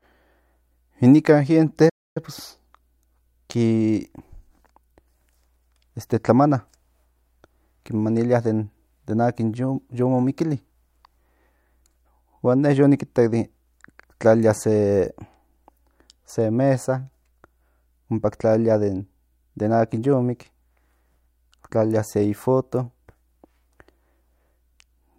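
The player most likely ran short of data or had its thread blocked at 1.89 s, causing a playback stall: the speech cuts to silence mid-flow for about 270 ms, until 2.17 s, then resumes from where it stopped.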